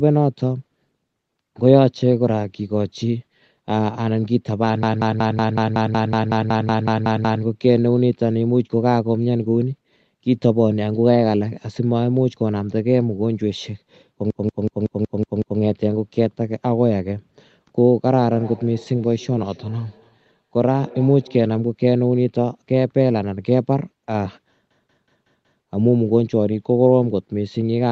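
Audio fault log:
4.83–7.43 s, 14.30–15.60 s and 24.71–25.64 s: system hang loop. The system froze while the audio hardware kept replaying one ring buffer, so a slice of about 186 ms, consistent with an 8192-sample buffer, repeats exactly 14, 7 and 5 times. The result is a machine-gun stutter at about 5.4 Hz.
18.14–21.56 s: feedback echo between two devices. A second device in the room replayed this call's audio, and the microphone picked it up again. Each phrase returns after about 300 ms as a thinner, ringing repeat, peaking at about 21 dB below the speech.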